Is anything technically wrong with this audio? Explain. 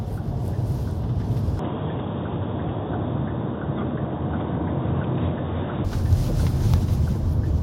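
Yes. From 1.59 to 5.85 s the sound turns dull and slightly quieter, about 5 dB down, with nothing above 3.8 kHz and a faint new background hiss. The input likely switched to a poorer device. A plain low-pass filter would not bring the level change and new noise, and the change and recovery happen instantly, with no gap at either switch.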